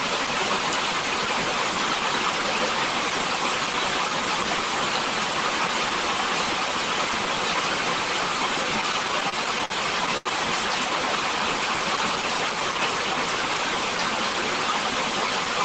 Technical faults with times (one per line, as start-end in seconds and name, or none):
8.81-10.27 repeated stalls (stutter)